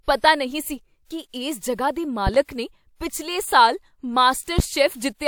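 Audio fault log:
2.27–2.38 s and 4.59–4.62 s, loud pop: a sudden voltage step or pulse, likely from a plug, a switch, static or a driver glitch, entered the signal path, and the circuits after it shaped it into a sharp transient. At 2.27 s this is heard as two pops in quick succession, peaking about 10 dB above the speech. At 4.59 s there is a single pop about 15 dB above it. The speech carries on underneath both.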